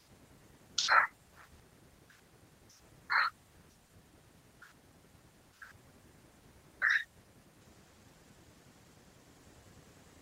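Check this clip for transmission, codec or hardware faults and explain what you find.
Two transmission faults turn up, both from packets going missing on the way to the decoder.

The first is a burst of packet loss at 1.07 to 1.15 s. About 60 ms of audio never arrived, so the receiver kept the last bit of sound going and faded it down across the hole. You hear a brief held buzz or hiss sinking away, and then the speech jumps ahead with that stretch simply gone.

The second is short concealed packet loss at 3.87 to 3.91 s. Only about 20 ms went missing here, and the receiver papered over it by extending the preceding sound, pitched if it was voiced and as shaped noise if not, before blending back into the real signal. It comes across as a quick smear or wobble, small enough that a short consonant can get swallowed.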